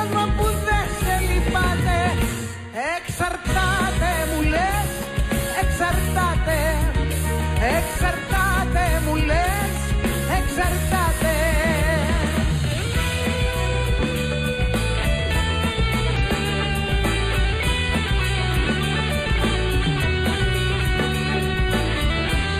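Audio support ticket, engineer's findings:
Constant hollow, dull tone. Channel delay (comb filtering): one channel a few samples late, summed to mono, first notch around 5 kHz. Notches stay fixed, unlike a sweeping phaser.

Brief glitches at 8.36–8.41 s, 16.16–16.20 s and 20.02–20.06 s. Damaged data in a compressed stream: decoder loses frame sync and searches for the next frame header.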